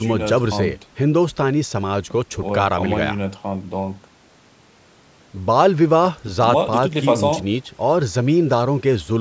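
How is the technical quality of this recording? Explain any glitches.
The speech has no audible glitches or dropouts, and it carries the character of a call's microphone processing, with the lowest bass filtered out and nothing above 8 kHz, which is normal for that path.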